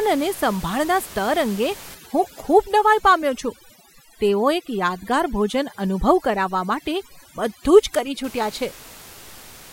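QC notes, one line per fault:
1.95–8.24 s, overdone noise removal: starting right after "સ્તર અંગે", the room noise beneath the speech, which sits about 20 dB down, is pulled down, leaving a floor dotted with small twinkling specks. The reduction is set so hard that individual frequency bands close to the noise estimate are switched off, taking quieter speech detail with them. Unlike a simple gate, which opens and closes as a whole, this flickers band by band.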